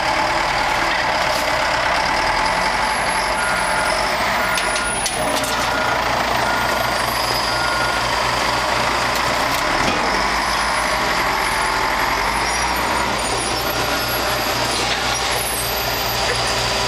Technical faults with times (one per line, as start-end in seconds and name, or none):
none